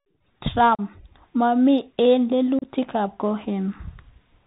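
Bluetooth CVSD headset codec damage runs through the whole of this speech clip and is plainly audible. The sound fits a 64 kbps CVSD link, which codes each sample as a single up-or-down bit with an adaptive step. That bandwidth leaves nothing above 4 kHz, so the speech sounds dull and narrow. Sibilants come out scratchy, loud high-frequency moments overload the step size and distort, and a grainy hiss sits underneath.

Unconcealed Bluetooth headset packet loss breaks the speech at 0.75–0.81 s and again at 2.59–2.68 s, removing about 37.5 ms of audio each time. In each case a handful of short voice packets between headset and phone never arrived, and silence or an idle pattern filled the gap. The first loss leaves a hole with abrupt edges. The second is split into pieces over 60 ms, the longest lasting 30 ms.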